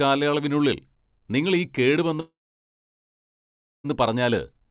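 From 2.2 s to 3.86 s the speech cuts out. A brief fading buzz is followed by about 1.5 s of silence, and the audio resumes with that stretch gone, likely a long network dropout. The waveform shows a flat gap. The spectrogram shows a blank column across the band, which the call codec caps at 4 kHz.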